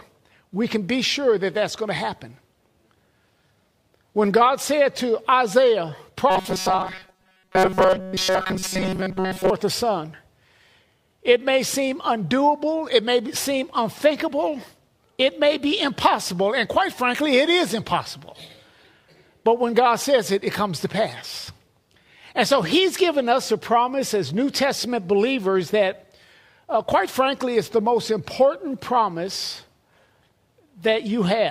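From 6.30 to 9.50 s the sound turns into a rigid, metallic buzz at 188 Hz, the robotic sound from repeated short buffers. The likely cause is that audio arrived too late and the playback repeated its last fragment, about 5.3 ms long, in place of most of the real material, roughly seven parts in ten. A spectrogram would show evenly spaced horizontal harmonics at multiples of 188 Hz, and the waveform would show identical cycles repeating every 5.3 ms.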